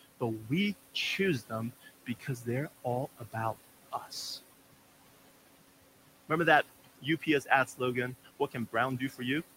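Noise suppressor artifacts run through the whole clip. The suppressor pulls the background down by about 17 dB between words, so the room noise, sitting about 14 dB under the speech, sinks and swells.

There's speech cut by the noise suppressor in five stretches: 0.01–0.5 s, 0.94–2.86 s, 3.18–3.55 s, 3.91–4.13 s and 6.84–9.22 s. The suppressor mistakes soft consonants and word endings for noise and ducks them by up to about 17 dB. It adds up to roughly a tenth to half a second per stretch, so those bits sound swallowed.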